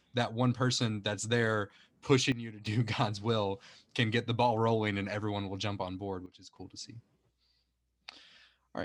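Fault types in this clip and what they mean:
Sudden gain jump: at 2.32 s and again at 6.26 s the speech and its background noise drop abruptly together by about 12 dB and 13 dB, holding for roughly a third of a second before returning, likely from a gain change applied without a ramp.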